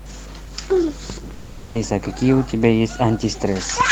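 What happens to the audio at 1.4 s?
A long network dropout runs from 1.33 to 1.78 s, likely from audio packets failing to arrive. The receiver stretches the last fragment into a fading buzzy hiss, then speech resumes with that stretch missing. A spectrogram shows smeared, unchanging bands that decay, with no formant movement.

Mains hum continues underneath at 50 Hz, strong enough to sit close to the speech level. It comes from power-line interference leaking into the signal. It appears as a steady horizontal line at 50 Hz and a low, regular ripple riding on the waveform.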